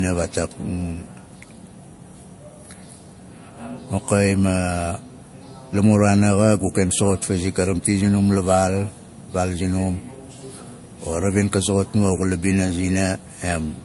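From start to finish the speech sounds dull, with nothing above about 11.3 kHz and a mix of different codec artefacts heard together. This is likely transcoding between lossy codecs: a low-rate MP3 encode, around 48 kbit/s, was re-encoded to Vorbis at a similar rate. The second encoder spent bits on the first one's damage, added its own, and kept the lowest band limit in the chain.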